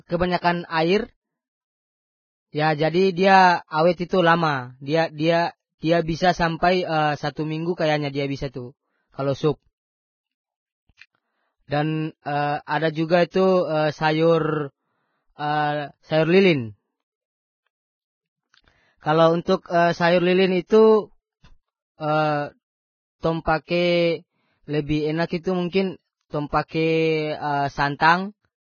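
From the start the speech sounds hissy and grainy, with nothing above 6.6 kHz, likely heavy Vorbis compression at a bitrate of roughly 13 kbps, with the treble crushed into noise. Around 13.30 to 13.34 s there's pre-echo: the codec's noise spreads about 35 ms ahead of a sharp attack, so a brief hiss precedes it and the onset smears.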